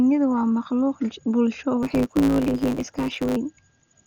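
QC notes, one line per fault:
throughout: Dolby Digital compression, likely the cause of the dull, rough quality. The speech sounds muffled, and the damage is heavy: a gritty, fluttering noise sits around the voiced sounds. That fits an AC-3 style encoder at a low bitrate, something like 48 kbps. At that rate the band is narrowed and many frequency lines get no real bits, so the decoder fills them with noise.
1.82 to 3.37 s: block size mismatch (truncated). A steady buzz at 109 Hz comes in, and the speech rushes ahead about 1.09 times faster. One stage is handing over longer blocks than the next one reads, so the tail of every block gets dropped. Each cut produces a tiny discontinuity, which gives the buzz at the block rate. The missing slices shorten the time, which speeds things up by the ratio of the two block sizes.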